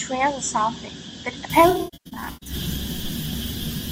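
From the start up to 1.5 s, the speech sounds dull and a bit boxy. Nothing gets through above 8 kHz, the level sits around 5 dB lower than what follows, and there's a faint bed of different background noise well below the voice, very roughly 40 dB down. At 1.5 s it opens back up cleanly with no gap. That pattern likely comes from the input being switched to a poorer device before switching back.

Between 1.69 and 2.54 s there's AAC frame loss with concealment. Chunks of the coded stream went missing, adding up to about 530 ms of lost audio scattered across roughly three quarters of a second. The decoder papered over the holes by reusing and reshaping the last good spectrum, so the speech turns smeared and phasey, with noisy patches. The longest dropout is somewhere around 100 ms.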